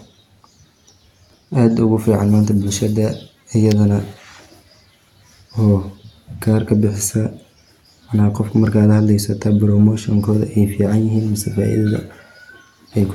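Nothing stood out on listening to this speech recording, and no technical problem could be heard at any point.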